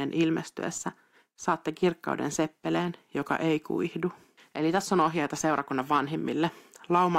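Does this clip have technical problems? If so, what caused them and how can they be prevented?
Yes. A block size mismatch (truncated) runs throughout the speech. One stage hands over longer blocks than the next accepts, so the tail of each block is discarded, producing a 43.1 Hz buzz that fits 1024-sample blocks, while the pace stays at normal speed. Prevent it by configuring every stage in the chain to use the same block size.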